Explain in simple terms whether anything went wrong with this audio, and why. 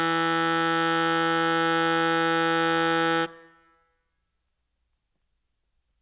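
Throughout the music, the bright upper sounds turn gritty and metallic, with stray tones that don't belong. This is aliasing: the audio was likely squeezed down to a much lower quality, one that fits 8 kHz, without first removing high frequencies, so everything above 4 kHz folded back as false pitches.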